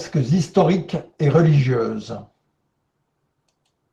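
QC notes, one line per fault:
Throughout, Opus voice compression. The speech sounds hoarse and slightly robotic. The damage is plainly audible. The top of the band is still present, which points to hybrid mode: a linear-prediction SILK layer codes the range up to 8 kHz, and a CELT layer covers the range above it. The coarse, grainy texture fits a low rate of around 16 kbps. At that rate the excitation is coded roughly, in frames that fit 20 ms.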